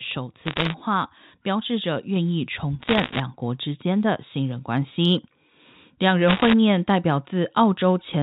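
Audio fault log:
0.42 to 0.74 s, 2.82 to 3.2 s and 6.28 to 6.53 s: bit errors on a digital phone line. Three short bursts of sharp crackle sit over the speech. Scattered flipped bits, somewhere over one percent, each corrupt a single sample. Hits on sign or high bits make the loudest ticks.
2.16 s: microphone volume stepped up. The whole signal jumps about 3 dB louder in one step, voice and background together. Input gain was raised on the device, not in the mix. The 4 kHz band limit of the G.711 phone line stays unchanged across the jump.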